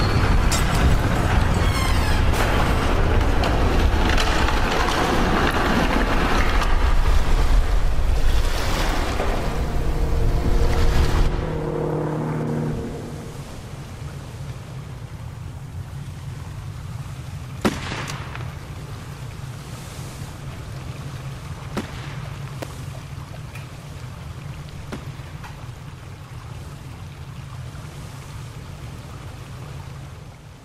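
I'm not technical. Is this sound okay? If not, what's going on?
No. At 22.62 seconds there is a sharp snap, over in a fraction of an instant, laid on top of the sound. This is an electrical switching spike, likely from a nearby switch, motor or static spark that the audio cable picked up. Unlike a dropout, where the sound briefly cuts out, nothing goes missing here: the recording carries on underneath and the snap is simply added over it, a crisp electrical crack.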